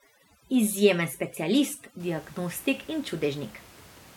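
From 0 to 2.0 s, before "diagnostik in", the background drops and turns twinkling: overdone noise removal, cutting bands near the estimated noise, about 25 dB below the speech.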